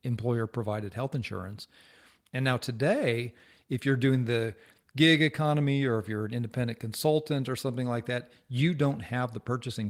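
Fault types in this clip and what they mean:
No faults are audible anywhere in this speech recording.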